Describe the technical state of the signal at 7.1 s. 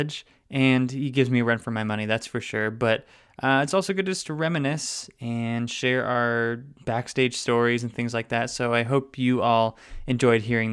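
At 7.1 s the speech signal is intact, with no audible technical fault at that moment.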